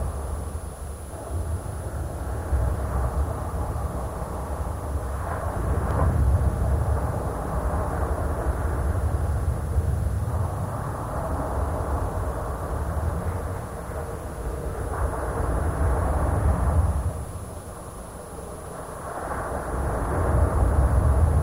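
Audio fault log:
5.91–5.93 s, loud pop: a single sharp pop rises a few dB above the surrounding sound, which carries on underneath. A sudden voltage step, likely from a plug, switch, static discharge or driver glitch, entered the signal path and was shaped by downstream circuitry into this brief pulse.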